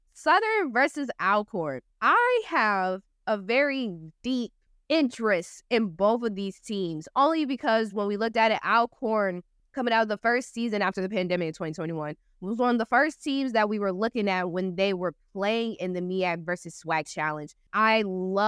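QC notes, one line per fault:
No faults detected in this speech clip on listening.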